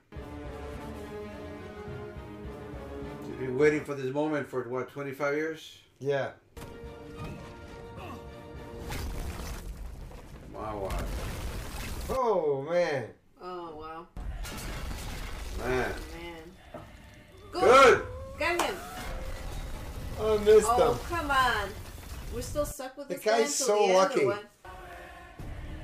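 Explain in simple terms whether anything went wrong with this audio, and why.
Overlapping chunks: 10-second pieces each started 13 ms early, so a sliver plays twice, causing a click or stutter at 4.90, 14.92 and 24.93 s.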